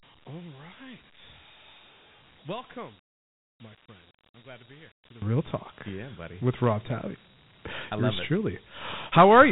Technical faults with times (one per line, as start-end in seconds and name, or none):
0.00-9.52 Dialogic VOX ADPCM
0.00-5.22 one channel inverted